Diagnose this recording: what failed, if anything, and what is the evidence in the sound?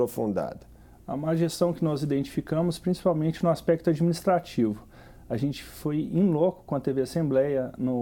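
Nothing failed; no fault can be heard anywhere.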